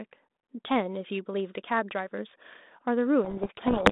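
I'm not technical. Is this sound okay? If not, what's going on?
No. From 3.24 s to the end, the speech turns into harsh, grinding distortion: a codec payload misread, where the phone codec's bits arrive in the wrong order.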